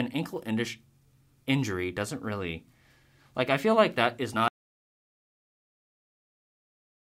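An audio dropout to silence begins at 4.48 s, right after "feel like that is", and lasts to the end, about 2.5 s. The speech cuts off mid-flow into silence with no room tone, likely because the input was lost while recording continued writing silence.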